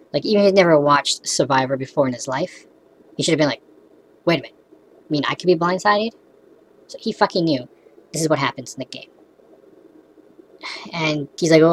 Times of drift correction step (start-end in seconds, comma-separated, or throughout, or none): 1.07-2.27, 7.67-8.23